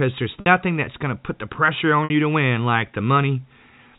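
At 0.40 to 0.46 s and 2.04 to 2.10 s, packet loss with pitch repetition bridges 60 ms gaps, fitting three lost 20 ms packets, by looping the last pitch period. Each sounds briefly held and buzzy. The waveform shows identical repeating cycles fading, and the spectrogram shows frozen, flat harmonics.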